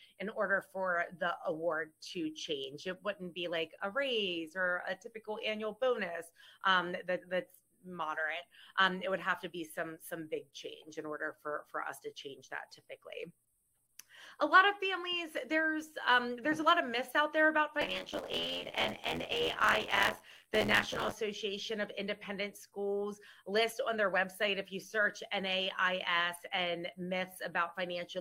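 From 17.81 to 21.13 s, buffer tearing gives a steady 86 Hz robotic buzz: about 40% of each 512-sample buffer replays audio about 20 ms old.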